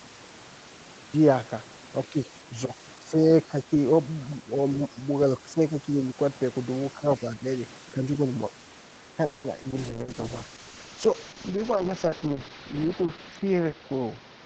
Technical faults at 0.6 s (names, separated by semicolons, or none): cut-off start